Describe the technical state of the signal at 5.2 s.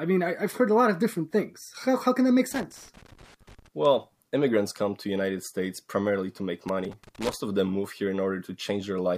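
At 5.2 s the speech signal is intact, with no audible technical fault at that moment.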